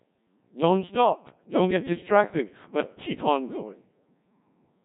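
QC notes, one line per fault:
Throughout, Codec 2 vocoder: the speech is robotic and buzzy, with nothing above 3.8 kHz and heavy coding damage. The decoder does not reproduce the original waveform. It rebuilds the voice from sine waves using only pitch, voicing, energy and a coarse spectral envelope, so natural texture and breath detail are replaced by a synthetic, mechanical tone. The degree of smearing points to one of the lowest modes, around 1.3 kbit/s.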